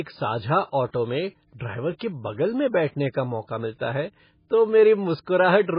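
A starved MP3 encoder is the likely culprit behind this speech recording: throughout, the sound is band-limited with nothing above 5 kHz, which points to a very low bitrate of about 16 kbps. With so few bits, weak frequency lines drop in and out between frames, giving the heavy MP3 compression damage heard as a watery, swirling texture, metallic chirping on s sounds, and smeared attacks.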